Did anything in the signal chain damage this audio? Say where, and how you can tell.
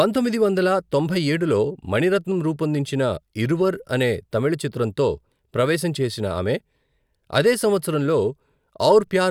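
No, nothing along the chain seems to have hurt this speech recording; I can't hear any stage leaving its mark on it.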